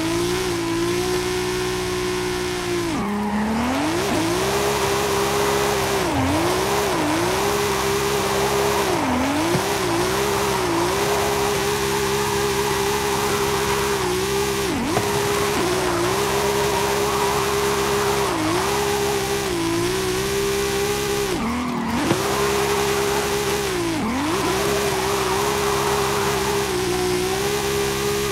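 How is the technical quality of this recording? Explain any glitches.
The technical quality of the recording holds up, with no glitches to explain.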